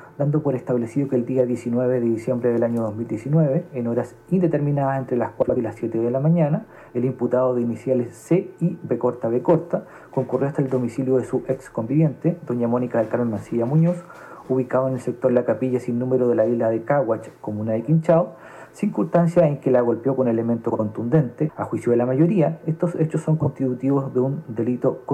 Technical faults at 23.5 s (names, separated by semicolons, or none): frames out of order